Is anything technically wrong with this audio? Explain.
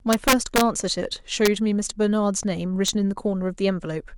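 Yes, there's integer overflow in this speech clip, hitting three times: 0.13 to 0.61 s, 1.46 to 1.48 s, and a single spot at 2.88 s. The gain pushed loud peaks past the integer ceiling, about 3 dB over in the first stretch, about 1 dB in the second, and right at the edge at 2.88 s. Instead of being capped, those samples wrapped around to the opposite extreme. You hear harsh, violent cracks, far nastier than ordinary clipping.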